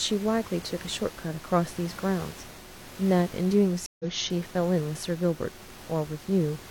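At 3.86 s the speech drops out in a stream reconnect. The connection broke, the player went quiet for about 135 ms, then reconnected and began decoding afresh mid-stream. The fault runs to 4.05 s. When sound returns it has skipped ahead by roughly 150 ms, so a short piece of speech is simply missing. The room noise, about 18 dB below the speech, drops out with it and returns with the sound.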